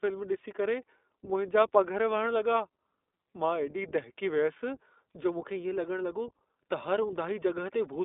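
Throughout, the iLBC codec leaves speech rough, its independently coded 20 ms frames fitting a 15.2 kbps mode; the spectrogram is blank above 3.8 kHz.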